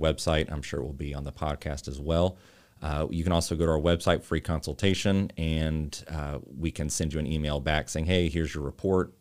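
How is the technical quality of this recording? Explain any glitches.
No glitches can be heard anywhere in the recording. The speech runs on without any audible interruption or disturbance to the signal.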